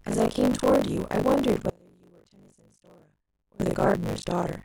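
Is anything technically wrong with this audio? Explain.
Yes, there are two faults. Buffer tearing runs throughout: writer and reader of the ring buffer have slipped, so part of each period replays audio from roughly 40 ms earlier, giving a continuous 50 Hz robotic buzz on the speech. From 1.70 to 3.60 s there is an audio dropout to a faint residue: the speech cuts out abruptly for 1.9 s, leaving only faint sound about 30 dB down, likely because the source was lost while the downstream path stayed live.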